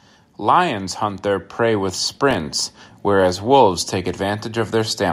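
Automatic gain rising runs from 0.47 to 2.61 s. The gain control judges the incoming speech too quiet and lifts its level step by step, by about 6 dB, so the voice and the background swell together over roughly two seconds.

Processor overload crackle appears between 2.12 and 2.40 s. The processor falls behind and misses around ten buffer deadlines again and again across that stretch, each leaving a sharp-edged gap of silence lasting about a millisecond or two, which together sound like a gritty burst of crackle over the speech.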